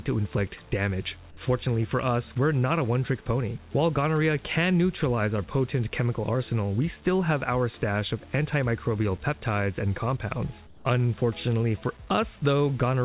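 From 10.67 to 10.85 s, the background drops out for 180 ms and is replaced by comfort noise: a flat, featureless hiss about 7 dB quieter than the real background, which otherwise sits about 26 dB below the loud passages. The likely cause is discontinuous transmission, where the sender stops sending during a pause and the receiver fills the gap with synthetic noise. On a spectrogram the band shows a smooth, textureless patch, and the waveform shows a uniform step down in the noise floor. Through the call path the audio has nothing above 4 kHz, which fits a narrowband telephone codec such as G.711.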